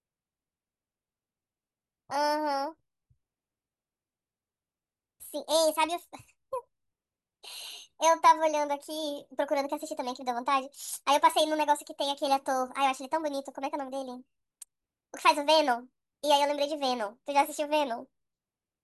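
Speech runs about 1.45 times too fast from start to finish and sits roughly 6.5 semitones high, the hurried, chipmunk-like signature of a wrong sample rate. The ratio fits audio recorded at 22 kHz but played at 32 kHz without conversion. Unlike a pitch shift or a time-stretch, which move only one property and leave warbly processing artefacts, here tempo, pitch and vocal formants all rise together by the same factor, cleanly.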